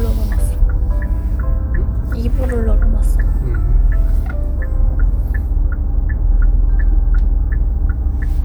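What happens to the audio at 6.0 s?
Mains hum runs through 6.0 s, as it does across the whole clip: a ground loop or nearby transformer leaks the 60 Hz power line into the signal, adding a steady low drone with some low harmonics, loud enough to sit only slightly below the sound itself.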